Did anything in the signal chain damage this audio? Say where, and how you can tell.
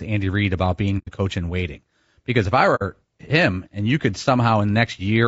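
Yes. At the codec stage, the speech sounds rough and grainy throughout, with noise filling the gaps between harmonics and a thin, synthetic top band. This is likely low-delay AAC compression (AAC-ELD), whose short frames resolve pitch harmonics poorly. The damage fits a bitrate around 32 kbps.

There is also AAC frame loss with muting, from the network or transport stage. Soft-edged silent holes appear at 0.98–1.09 s, just before "coach in waiting", and at 2.75–2.82 s, between "if I" and "him and you could". They last about 90 ms and 60 ms, which fits three and two lost frames. The decoder zeroed those spectra, so the overlapping windows fade the sound out and back in.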